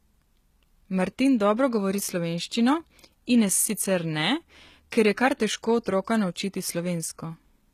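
Right through the speech there's plainly audible HE-AAC compression damage, with nothing above 14.9 kHz. The treble sounds likely rebuilt by band replication from lower bands, so it stays bright but its harmonics don't line up, and s sounds come out gritty and lispy, which fits a low bitrate around 20 kbps.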